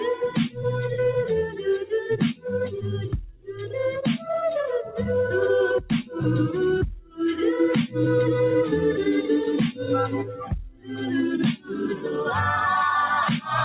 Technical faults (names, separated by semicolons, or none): noise suppressor applied to music or sounds; sound cut by the noise suppressor